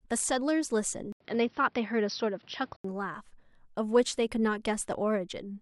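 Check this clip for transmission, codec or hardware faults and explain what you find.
One fault: from 1.12 to 2.84 s the input likely switched to a poorer device. After an 80 ms waveform gap, its narrower band leaves the spectrogram empty above 5.8 kHz, with new faint noise, making speech dull at similar level.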